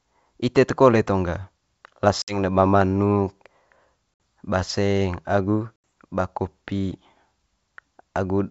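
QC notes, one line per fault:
2.22–2.40 s, 4.14–4.20 s and 5.77 s, packet loss on an ADPCM call: each event drops about 60, 60 and 80 ms of the G.722 stream, consistent with a few packets each. The spectrogram shows hard-edged vertical blank gaps, and the waveform shows abrupt flat lines. The decoder's predictor and step size drift from the sender's, so speech resumes with brief, slight distortion, settling within tens of milliseconds.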